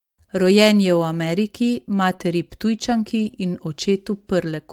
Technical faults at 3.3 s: lost packet rebuilt from error correction; short concealed packet loss

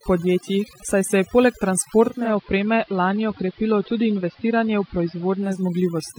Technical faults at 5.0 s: overdone noise removal; digital radio blending to analogue

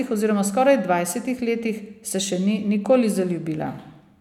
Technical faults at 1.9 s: none

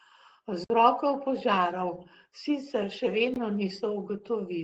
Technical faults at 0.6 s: Opus voice compression; block of digital silence

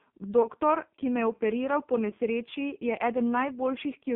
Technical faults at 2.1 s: AMR narrowband mobile codec; lost AMR speech frames

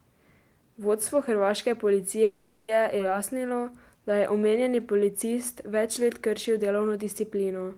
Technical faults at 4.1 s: jitter buffer slow-down

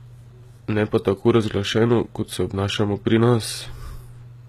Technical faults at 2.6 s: HE-AAC compression

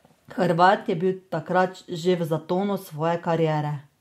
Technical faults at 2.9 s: none

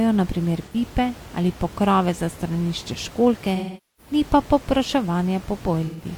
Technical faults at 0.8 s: AAC frame loss with concealment

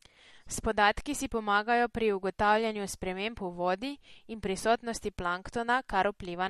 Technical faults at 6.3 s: MP3 compression

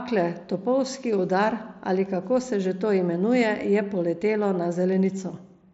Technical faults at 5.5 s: none

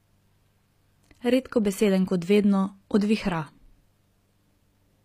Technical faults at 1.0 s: HE-AAC compression

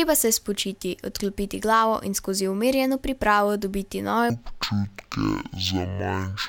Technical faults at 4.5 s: stereo read as mono

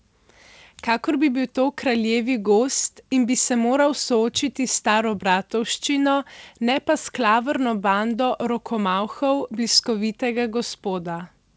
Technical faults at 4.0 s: none

